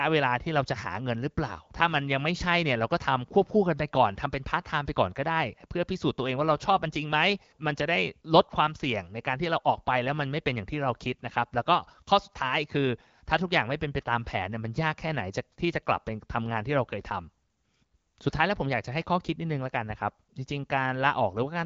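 Nothing stood out on listening to this speech, which comes through the AMR wideband (HD Voice) codec at 12.65 kbit/s.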